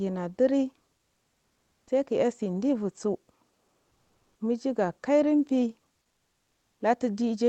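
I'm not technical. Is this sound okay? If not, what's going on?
No. Comfort noise in place of the background at 3.51–4.35 s and 6.07–6.79 s: the call likely stopped sending during pauses, so the receiver filled in a flat, quieter hiss.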